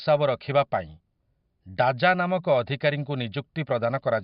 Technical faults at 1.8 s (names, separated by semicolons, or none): none